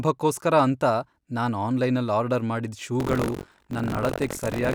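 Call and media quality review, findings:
Buffer tearing, 2.99 s to end of clip, starting after "ನಾನ್ ಆನ್ಲೈನಲ್ ಆರ್ಡರ್ ಮಾಡಿದ್". Robotic 46.9 Hz buzz on speech. Writer and playback pointers crossing each period, fits 1024-sample ring buffer. Roughly a fifth of each buffer replays audio about 100 ms stale, hard joins both sides.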